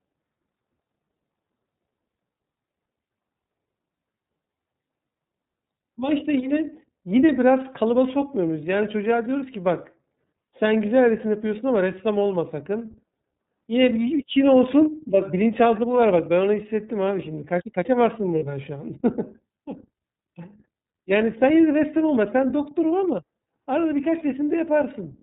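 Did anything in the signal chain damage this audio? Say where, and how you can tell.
Yes. The codec stage damaged the whole clip: this is iLBC, with nothing passing above 4 kHz and a plainly rough, slightly synthetic edge on the speech. Unlike a simple low-pass or telephone filter, the graininess comes from per-frame excitation coding, consistent with 30 ms frames at around 13.3 kbps.

The network stage adds lost iLBC frames at 18.39 s and 20.87 s, each a single 30 ms gap. They sound like a brief held, buzzy vowel as the decoder repeats the last pitch cycle with noise, not silent dropouts. The voice recovers immediately because each frame decodes independently.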